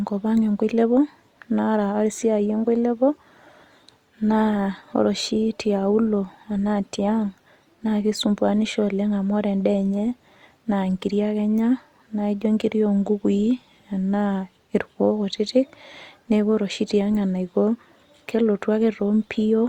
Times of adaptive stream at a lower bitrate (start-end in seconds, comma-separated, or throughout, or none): 3.94-7.94